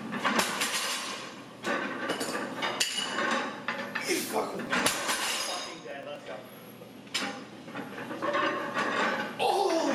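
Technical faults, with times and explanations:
4.42 to 6.28 s, periodic USB or driver dropouts: a regular tick every 0.124 s, around fifteen in all, as something stalls the USB bus or audio driver and roughly a millisecond of audio is skipped each time, splicing the sound together with a small click.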